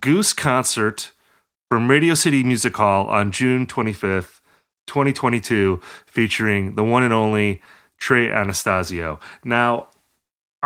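Nothing technically wrong can be heard in this speech clip. The light Opus voice compression shows only as a faint coding texture while the band stays full width, which fits the hybrid mode at around 24 kbps.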